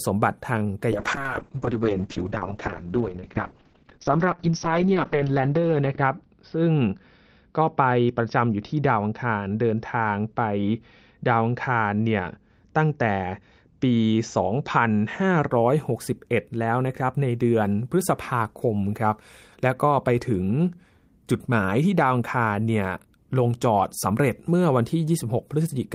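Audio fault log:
0.93–15.55 s, call bitrate drop: the speech turns rough and watery as coding becomes coarser, and the top end narrows from around 20 kHz to about 6 kHz, leaving it muffled. The sound points to the call's bandwidth estimate collapsing and the encoder being pushed from roughly 32 kbps down to around 7 kbps, with the worst stretch lasting about 4.4 s before the bitrate recovers and full clarity returns.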